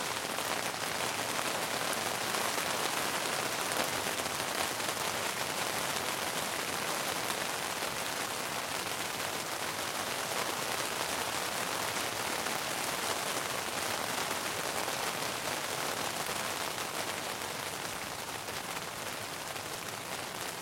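At 6.36 s and again at 19.76 s the sound jumps forward, with no gap between the two sides. This is a dropped buffer, likely an overrun: roughly a tenth of a second is lost first, then about 40 ms.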